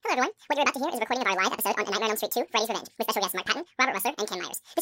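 From start to finish, the speech plays with a wrong sample rate: samples are clocked out twice as fast as captured, with no conversion, consistent with 24 kHz audio played at 48 kHz. Speed doubles and pitch rises a full octave, 12 semitones, so voices sound high, thin and hurried.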